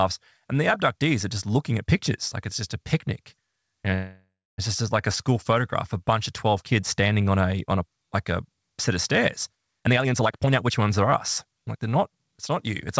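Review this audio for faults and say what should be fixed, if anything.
At 3.94 s the sound stalls into a fading buzz that drops to about 280 ms of silence, resuming at 4.60 s with "just like a school" and nothing lost. This call audio freeze likely came from held-up packets draining the jitter buffer, adding 0.64 s of delay. Steadier network delivery or a slightly deeper jitter buffer would prevent it.

Two stretches sound rushed at unchanged pitch. From 9.79 to 10.90 s, after "a set of stairs", the audio runs at 149% speed, and from 11.44 to 12.16 s, after "are us", at 111%. This is jitter buffer speed-up: the receiver trimmed pitch-period slices, roughly half a second and then about a tenth of a second, to shed excess buffered delay. Limiting packet bunching, or letting the buffer drain more gradually, would avoid it.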